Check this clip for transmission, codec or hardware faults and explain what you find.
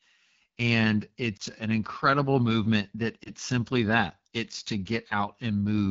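Two faults are present: low-rate AMR wideband coding across the whole speech clip, and two brief lost AMR speech frame events.

The AMR wideband (HD Voice) codec runs at 8.85 kbit/s, one of its lowest rates. The pulse-driven vocal tract model is starved of bits, so the speech sounds plainly rough and raspy throughout, with the top band filled by shaped noise. This constant texture differs from the brief, localised frame-loss events.

Lost AMR speech frames occur from 1.37 to 1.42 s, just before "an incredible movement that", and from 3.23 to 3.31 s, between "an incredible movement that" and "simply that it's to". Each fits a single lost 20 ms frame. The decoder reused the last good pitch and vocal tract settings at reduced gain, so each event is a short dip or warble rather than a hard gap or click. Level and clarity recover roughly just afterwards.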